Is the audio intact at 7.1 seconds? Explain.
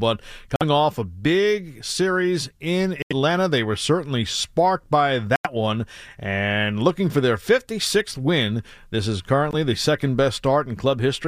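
Yes, the speech plays through 7.1 seconds without any dropout, click, distortion or other fault.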